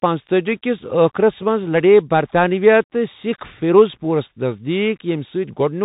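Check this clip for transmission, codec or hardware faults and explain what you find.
There is one fault, and it runs through the whole clip. The speech sounds boxed-in and telephone-like, with nothing above 3.8 kHz, scratchy s sounds, and a grainy hiss beneath it. This is the Bluetooth CVSD headset codec, whose one-bit, step-adapting coding (consistent with a 64 kbps link) can't track sharp high-frequency movement.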